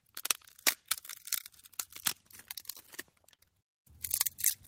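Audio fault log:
3.35–3.42 s, short stall from a late packet: a packet arrived late, the jitter buffer ran dry, and the receiver stretched the last sound by about 34 ms, then resumed from the same point. Nothing is lost, but everything after plays 34 ms later, so the sound briefly hangs with a faint buzz or dip. On a spectrogram, the spectral shape freezes into flat horizontal bands. The waveform shows a short, repetitive stretch.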